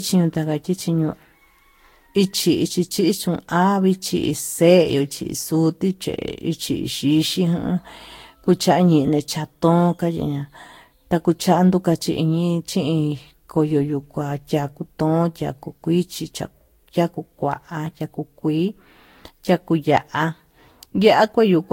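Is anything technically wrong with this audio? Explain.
Yes. Throughout the speech there is generation loss. The sound is swirly, smeared and hollow, with blurred consonant onsets and nothing above 16.6 kHz. The likely cause is repeated lossy re-encoding, around five passes, with a character that fits Vorbis at roughly 65 kbit/s. Each pass quantises again on a shifted frame grid, so noise and spectral holes build up. A single encode at that rate would not sound this degraded. The excess smear is what marks repeated passes.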